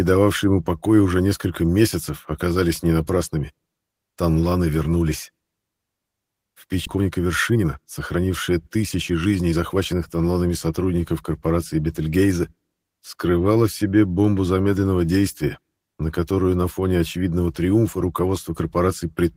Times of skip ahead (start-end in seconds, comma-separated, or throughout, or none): 6.85